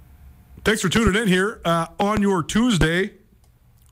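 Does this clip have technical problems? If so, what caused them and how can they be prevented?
Yes. Loud pops occur at 0.97 to 1.10 s (a double pop, just before "in here uh"), at 2.01 to 2.20 s (another double, right after "in here uh") and at 2.81 to 2.85 s (single). Each is a voltage pulse, likely from a connector, switch or static discharge, that jumps well above the speech. The speech continues underneath, which sets these pops apart from a dropout. Secure cables and avoid switching or handling gear while recording.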